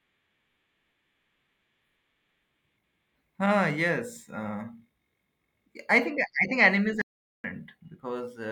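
At 7.02 s an audio dropout to silence cuts the speech for 0.43 s, likely a lost input. The waveform shows a flat line and the spectrogram a blank, tone-free gap.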